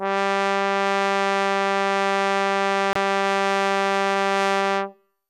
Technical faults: digital broadcast dropout

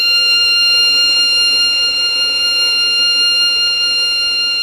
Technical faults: none

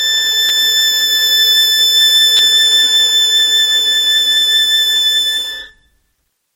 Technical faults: repeated buffer

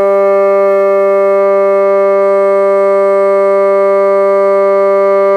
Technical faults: none

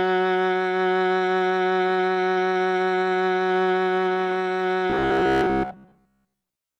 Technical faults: robotic sound from repeated short buffers

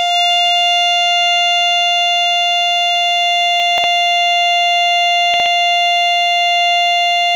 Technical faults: chunks out of order

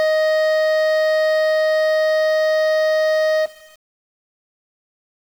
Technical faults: low bit depth without dither

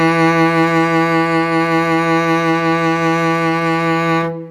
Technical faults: none

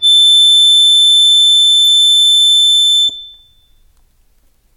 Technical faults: adaptive stream starting at a low bitrate

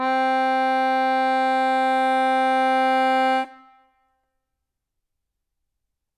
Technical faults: none

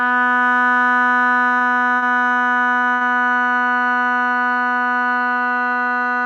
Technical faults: short stall from a late packet

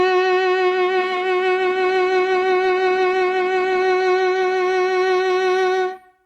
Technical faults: call bitrate drop

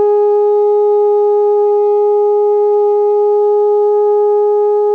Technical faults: none

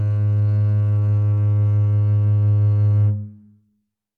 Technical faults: none

